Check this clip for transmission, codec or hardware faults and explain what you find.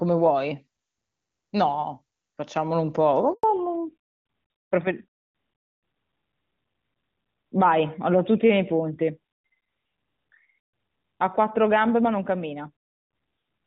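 Two linked faults appear, both around 3.3 s in this speech clip: a brief dropout followed by a lasting loss of bandwidth.

Handover gap, 3.33 to 3.43 s: the call switches networks and no speech frames arrive for about 100 ms. The sound fades within milliseconds and then stops completely. A clean, silent hole with no garbled or repeated fragments marks it as a handover, not packet loss with concealment.

Fallback to narrowband, 3.43 s to the end: after the switch the call runs on an older narrowband codec, so nothing above 4 kHz remains. Before the gap the audio has wideband clarity, consistent with AMR-WB at a high rate such as 23.85 kbit/s. Afterwards it sounds duller and rougher, consistent with AMR-NB at 12.2 kbit/s. The sharp cutoff beginning exactly at the gap, rather than gradual muffling, separates this from a microphone or acoustic problem.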